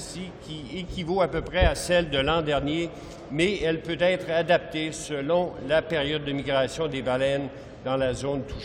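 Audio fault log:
Nothing stood out on listening; no fault could be heard anywhere in the audio.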